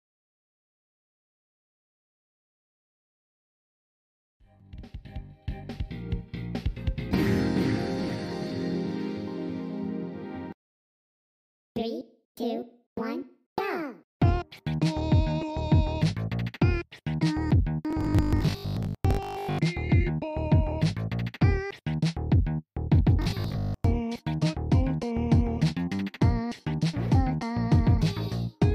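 From 17.91 to 19.61 s and again from 23.22 to 23.88 s, the sound turns into a rigid 50 Hz metallic buzz, robotic sound from repeated short buffers, likely from 20 ms chunks being replayed while most, then about half, of the real audio is skipped. A spectrogram shows evenly spaced harmonics; the waveform shows identical repeating cycles.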